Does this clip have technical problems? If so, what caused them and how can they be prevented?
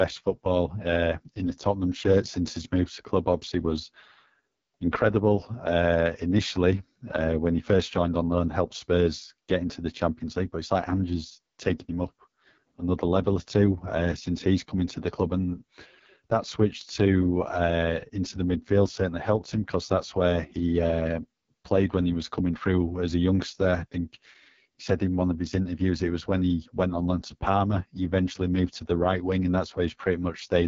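Yes. Throughout, the speech carries AMR wideband (HD Voice) codec damage. It sounds rough and raspy, which fits the codec's lowest mode, around 6.6 kbit/s. The coarse pulse-driven vocal tract model leaves a smeared, buzzy spectrogram with nothing above 7.3 kHz. Preventing it means sending the call at 12.65 kbit/s or higher.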